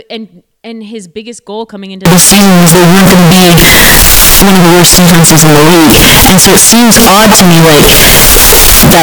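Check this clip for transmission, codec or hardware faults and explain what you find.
One fault is present. From 2.05 s to the end, signed and unsigned samples are mixed up. The likely cause is flipped top bits on 16-bit samples. The speech becomes harsh, uniformly loud distortion.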